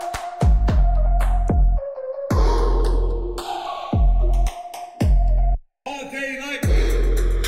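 From start to finish the two channels are drifting apart: they were captured on devices running from separate clocks that disagree by something like 70 parts per million, so the delay between left and right keeps creeping, reaching roughly half a millisecond by the end. Folded to mono, the comb-filter notches sweep slowly through the spectrum, heard as a gradual flanging. A fixed timing offset would leave the notches parked in place; here they never stop moving.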